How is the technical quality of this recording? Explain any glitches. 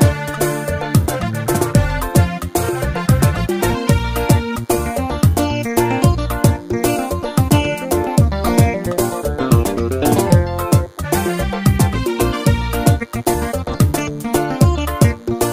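The recording carries one fault. A DECT cordless phone buzz runs through the whole clip. A DECT handset or base station nearby transmits a brief radio burst every 10 ms. The audio circuitry rectifies those bursts into an audible signal, so the buzz repeats at 100 Hz. It sounds thin and steady, with a dense stack of harmonics above the fundamental. It sits about 35 dB below the main sound. It stays faint but is constant behind everything.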